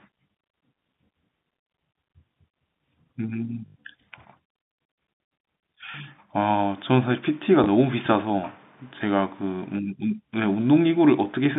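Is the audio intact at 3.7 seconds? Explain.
No. From 3.66 to 3.76 s, about 100 ms of packets never arrived, a gap that fits five 20 ms packets, so the receiver kept replaying the last packet it had until fresh speech arrived. This is packet loss with the last packet repeated. The copies don't join in step with the speech's pitch, and the run buzzes at the repeat rate, near 50 Hz, as a brief robotic stutter.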